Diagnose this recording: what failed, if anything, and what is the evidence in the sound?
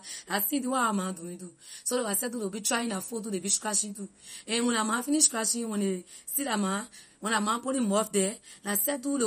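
Throughout the speech there is a watery, swirling quality, with metallic chirps on the s sounds and softened, smeared consonant attacks. Nothing is present above 15.2 kHz. This is plainly audible codec damage, most likely MP3 compression at the codec stage. Starved of bits, which fits a low bitrate of around 48 kbps, the encoder has cut the treble at a fixed frequency and dropped weak spectral lines that flicker in and out between frames.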